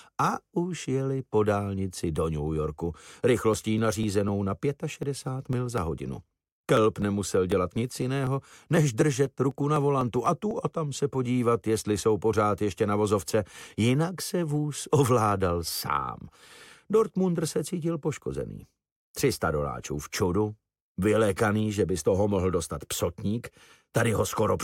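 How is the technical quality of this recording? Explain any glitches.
A stretch of regular ticking affects the technical quality. From 3.54 s to 11.26 s, evenly spaced clicks recur every 0.249 s, around thirty in all. These are periodic USB or driver dropouts. Something stalls the audio path at a fixed interval, skipping about a millisecond of audio each time, and the resulting discontinuities tick wherever sound is present.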